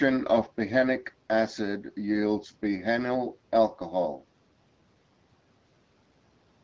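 No technical faults can be heard anywhere in the speech. It has the band-limited sound of a wideband call, with nothing above 8 kHz, and the AMR-WB coding at 12.65 kbit/s leaves only light traces of the codec.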